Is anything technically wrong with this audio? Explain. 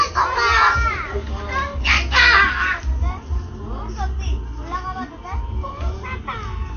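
Yes. AAC compression damage runs through the whole clip. Nothing sounds above 6.5 kHz, so everything is dull. Coarse spectral quantisation, likely from AAC-LC at a low rate fitting about 32 kbps, smears detail and leaves a warbling, fizzy texture on sustained sound.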